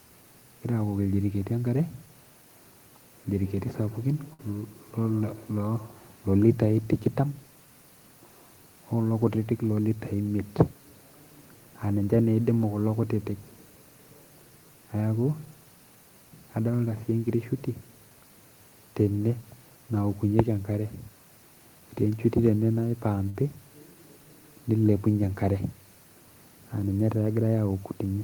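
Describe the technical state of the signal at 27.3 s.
At 27.3 s the speech signal is intact, with no fault audible at that moment.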